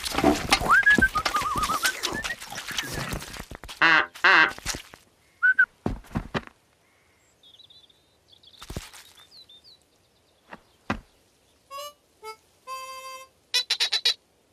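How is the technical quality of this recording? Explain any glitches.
The recording has two short faults close together, both in the first five seconds.

From 2.55 to 2.62 s there is DAB burbling. Weak reception likely let bit errors slip past error correction. Corrupted data put short blips of noise into single frequency bands. It sounds like brief blips of noise.

From 2.99 to 4.95 s a train of clicks runs over the sound. About fifteen similar clicks arrive unevenly, around 7.7 per second, peaking about 5 dB above the programme. The cause is probably interference from nearby equipment or a faulty connection or power supply. It is heard as irregular ticking.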